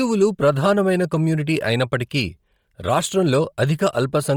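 Throughout the speech, high frequencies sound grainy and breathy, with noise standing in for real detail. Heavy Bluetooth LC3 compression is the likely cause. The damage fits a bitrate near 32 kbps with 10 ms frames, where upper bands are discarded and noise-filled.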